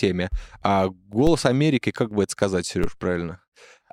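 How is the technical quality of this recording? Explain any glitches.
The speech carries two brief low thumps from a DC step, at 1.27 s and at 2.84 s just after "как бы это сказать". Each time the waveform's zero line jumps abruptly, and the offset then drains away through a 5 Hz high-pass.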